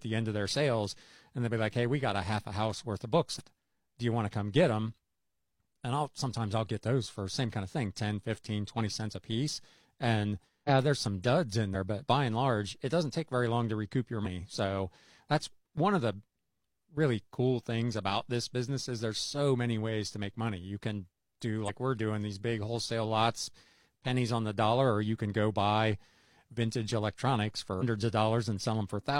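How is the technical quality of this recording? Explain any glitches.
Six compressed frames skipped dropouts break the speech, at 3.35, 10.64, 11.71, 14.21, 21.64 and 27.77 s. At each, whole blocks of coded audio never reach the output, so the talker jumps ahead by about 50 to 200 ms, which fits frames of roughly 46 ms. The first cuts from "a house worth of" straight to "do you want to".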